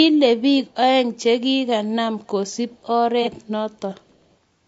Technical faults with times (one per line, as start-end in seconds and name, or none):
0.00-4.68 low-delay AAC compression
3.23-3.28 AAC frame loss with concealment
4.09-4.15 echo leak